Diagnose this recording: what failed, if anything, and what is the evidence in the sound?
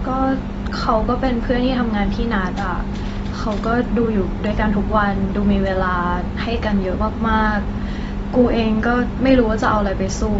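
The codec stage failed. Throughout the speech, nothing is heard above 7.6 kHz, and the damage is plainly audible as a dull, smeared sound. The likely cause is AAC compression at a bitrate near 24 kbps. The encoder lowered its cut-off and quantised the spectrum coarsely to save bits.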